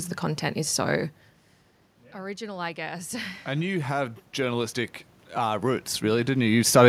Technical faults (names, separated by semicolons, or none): automatic gain rising